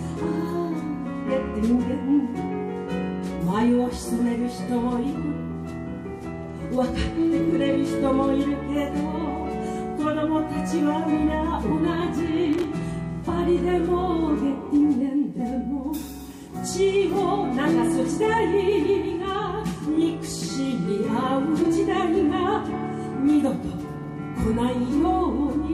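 At 12.53 to 12.64 s, loose connector crackle: a worn contact chopping the signal gives a scratchy burst, seen as jagged waveform spikes and broadband vertical streaks.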